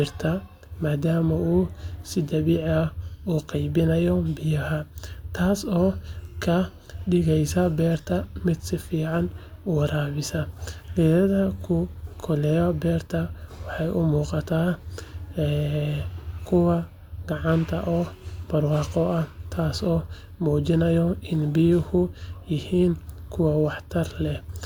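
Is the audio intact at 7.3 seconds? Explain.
Yes, the speech at 7.3 seconds is intact, with no fault at that moment.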